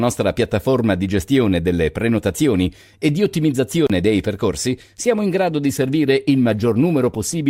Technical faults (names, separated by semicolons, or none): call bitrate drop